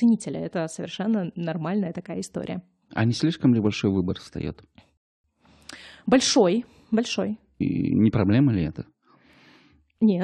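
A speech recording with a rebuffering stall at 4.97 s: the playback runs dry, drops to silence until 5.24 s, then picks up exactly where it stopped. Nothing's skipped, the player just ran out of downloaded audio and waited, adding about 270 ms of dead air.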